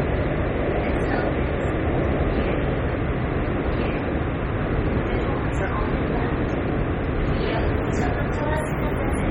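Heavy MP3 compression runs through the whole clip, likely from encoding at a very low bitrate around 32 kbps. The sound is watery and swirly, with smeared attacks. A spectrogram shows nothing above 16.2 kHz and speckled, flickering gaps where weak components drop out frame to frame.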